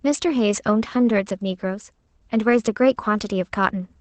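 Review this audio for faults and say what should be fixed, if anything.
Opus voice compression runs through the whole speech clip: the SILK coder has cut the band at 8.4 kHz, so a spectrogram shows nothing above that line, and coarse excitation coding makes the voice plainly muffled, hoarse and slightly robotic, which fits a wideband setting around 12 kbps. To prevent it, encode at a higher bitrate or keep a less compressed source.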